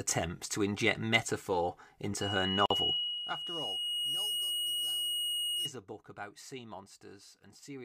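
At 2.21 s a loudspeaker feedback squeal begins. The microphone is picking up the speaker it drives, and at 2.9 kHz the loop gain has passed unity, so that tone feeds on itself. It swells over roughly two seconds into a piercing whistle that ends up about 10 dB above the speech, then stops at 5.72 s. On a spectrogram it is a single bright horizontal line at 2.9 kHz, faint at first and thickening as it grows.

Inside that stretch, from 2.66 to 2.70 s, there is a gap at a join of encoded pieces: a 46 ms hole where two separately encoded segments were butted together with the encoder's start-up delay and end padding left in. The speech drops out abruptly and resumes where it left off. The waveform shows a flat near-silent notch with slightly softened edges. The spectrogram shows a thin vertical blank cutting across everything.

From 2.88 to 3.32 s there is zipper noise. The level falls by about 20 dB in unsmoothed 2 dB jumps, roughly 30 per second, and each jump puts a tiny click into the signal, heard as a fast ticking that rides on the sound while it fades. 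The waveform envelope descends as a staircase rather than a ramp. The spectrogram shows faint, evenly spaced vertical striations across the band during that half second.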